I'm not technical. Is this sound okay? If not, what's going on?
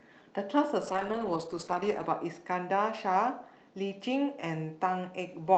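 No, not quite. From about 0.83 to 2.45 seconds there's a call bitrate drop: the connection briefly told the speech encoder to use far fewer bits. The sound goes rougher and more muffled, worst for just over a second, then recovers.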